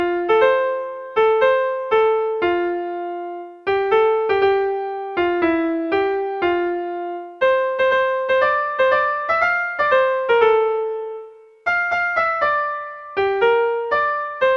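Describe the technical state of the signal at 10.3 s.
At 10.3 s the signal is intact, with no dropout, distortion, glitch or other technical fault audible at that point.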